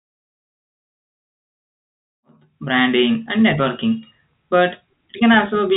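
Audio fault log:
No faults logged; the telephone-band speech, with nothing above 3.8 kHz, and the smooth fade-in reaching full level at 2.88 s are both normal.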